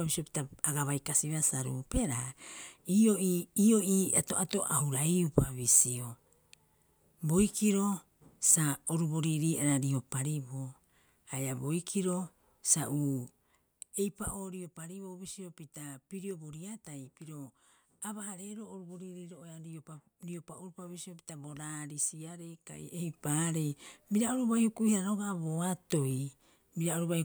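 No technical faults are audible.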